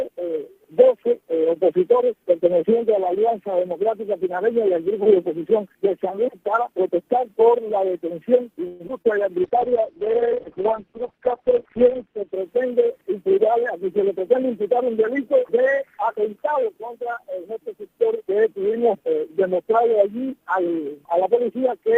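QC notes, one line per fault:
8.67–8.82 s, call audio freeze: the sound stalls and the last moment is stretched into a short fading buzz for about 124 ms, then resumes exactly where it left off with nothing lost. This is likely packets held up in transit until the jitter buffer ran dry, so the receiver extended what it already had. The pause adds that 124 ms of delay to everything after it rather than removing any audio.
8.88 s and 9.02–9.06 s, short concealed packet loss: two brief smears, the first a quick blur and the second a slightly longer wobble. Around 40 ms and then 20 ms of the stream never reached the decoder in time. The receiver papered over each hole by continuing the preceding sound and blending back into real audio. The first fill was cut short at about 11 ms as the receiver also trimmed back roughly 30 ms of the delay built up by the freeze.
9.45–12.40 s, call bitrate drop: the audio turns muffled and rough, losing its top end and taking on a watery, coarse texture for nearly three seconds. 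The bandwidth estimate collapsed and the encoder fell from 64 kbps to 7 kbps, holding the lowest rate for about 2.9 s. At that rate it codes much more crudely and cuts the audio band from 20 kHz down to 4 kHz, hence the dull, grainy sound until the rate recovers.
12.62–13.87 s, jitter buffer speed-up: the sound briefly runs hurried, about 9% fast, while its pitch stays put. After the earlier disruption the buffer held more audio than it aims for. To shed the excess, the receiver repeatedly snipped out tiny pitch-period-length pieces, removing roughly a tenth of a second in total over this stretch. The result is a rushed feel rather than any change in tone.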